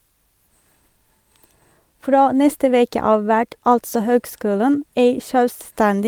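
No dropouts, distortion, clipping, noise bursts or timing errors can be heard anywhere in the recording.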